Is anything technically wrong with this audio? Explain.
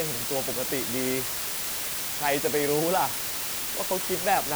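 Yes. Throughout the speech, a constant, even hiss sits under everything. It is low bit depth with dither. The audio has been reduced to just 3 bits, with dither added before rounding. That turns the coarse quantisation error into steady white noise rather than distortion. The hiss is roughly as loud as the speech itself. On a spectrogram it shows as a flat, uniform wash across all frequencies. On a waveform it is a thick noise band that never drops away between phrases.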